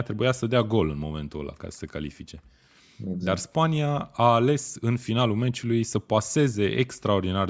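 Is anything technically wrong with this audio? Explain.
No, nothing technically wrong can be heard in this speech recording. The signal holds steady throughout, with no audible problems to report.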